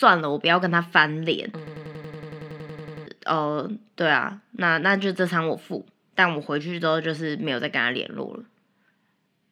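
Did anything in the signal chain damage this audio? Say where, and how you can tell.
Yes, a system hang loop at the driver or buffer stage, 1.67 to 3.07 s. One 93 ms slice repeats exactly, a 10.8 Hz machine-gun stutter that fits a 4096-sample ring buffer cycling during a freeze. About 1.5 s is lost. The waveform and spectrogram show identical, evenly spaced repeating blocks.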